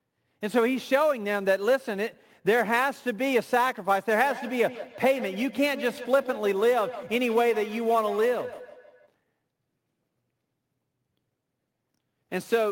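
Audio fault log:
throughout: sample clock jitter. There's a fine hiss and grittiness riding on the speech that swells on loud syllables and bright consonants and drops away in the pauses. That points to an unsteady converter clock, with timing wobble on the order of 10 microseconds, so each sample lands slightly early or late. The error scales with how fast the waveform is moving, and here it sits roughly 25 dB below the speech.
4.14 to 9.13 s: feedback echo between two devices. The speech comes back as a thin, ringy copy about every 150 ms, peaking around 14 dB under the direct sound. It sounds like a second device in the same room on the call: it plays out what the first microphone sent, and that microphone picks it back up. Each device's echo canceller only removes its own playback, so this loop slips through untouched.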